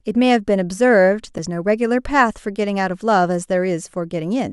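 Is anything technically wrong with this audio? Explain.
Yes. At 1.38 s, a CD skip: the laser jumped spiral turns, so a tick and brief mute precede displaced sound, shown as a tiny flat waveform gap.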